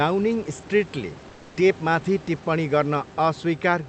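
At 1.29–1.55 s the background goes steady, featureless and about 4 dB quieter rather than silent: likely comfort noise in place of the background.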